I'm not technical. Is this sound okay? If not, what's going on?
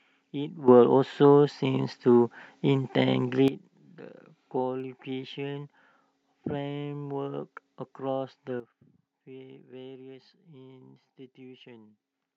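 No. The audio has two kinds of problem.

The first is a sudden gain jump. At 0.68 s the speech and the background hiss together get abruptly much louder, then drop back at 3.48 s. At 8.6 s the opposite happens: everything turns suddenly much quieter and stays that way to the end. There is no fade in or out, so the level snaps from one moment to the next. The likely cause is a volume setting being applied instantly instead of smoothly.

The second is dropped samples, heard as two single sharp clicks at 1.47 s and 4.8 s. At each point a tiny slice of the recording, only a handful of samples and far less than a millisecond, is missing, so the sound wave jumps straight to a later point. Nothing audible is lost, but the jump makes a tick. The likely cause is a brief hiccup in how the audio was passed along.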